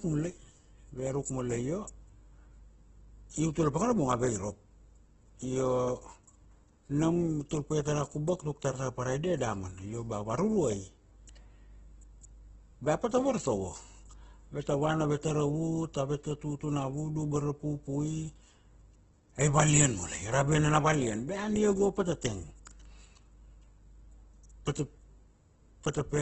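Opus compression runs throughout, with nothing above 8.2 kHz and heavy codec damage. The speech sounds rough and grainy rather than swirly: starved bands are refilled with folded or noise-like energy, likely from a CELT-mode encoder at a rate that fits roughly 12 kbps.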